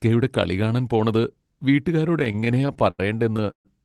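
From 2.19 to 3.00 s the speech shows repeated stalls (stutter). Packets reached the receiver late or too slowly, so the jitter buffer emptied twelve times. Each gap was filled by extending the preceding sound, up to 80 ms at once and 211 ms in all, roughly a quarter of that stretch. The speech drags and judders, but nothing is lost.

At 3.36 to 3.40 s there is a short stall from a late packet. One packet missed its playout time, the buffer briefly ran dry, and the receiver held the last sound for about 18 ms before resuming exactly where it stopped. The result is a slightly prolonged sound.

From 3.51 to 3.67 s the audio stops in what sounds like a call audio freeze, likely caused by packets held up in transit. The last sound is briefly continued, then fades into about 110 ms of silence within a 136 ms inserted gap before the speech picks up again. Throughout, the Opus call path limits the top end to about 12 kHz.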